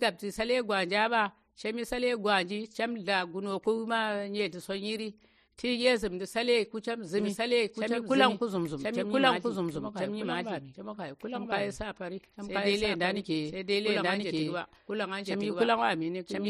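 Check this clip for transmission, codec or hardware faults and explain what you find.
One fault is present. From 7.18 s to the end, the speech carries a doubled audio track: a second full-band copy, at about the same level, trails the original by roughly one second. This likely comes from the signal being captured again through a slower path. It sounds like an abrupt, dry repeat with no room colour, and a spectrogram or waveform shows the same patterns repeated about a second later, starting sharply.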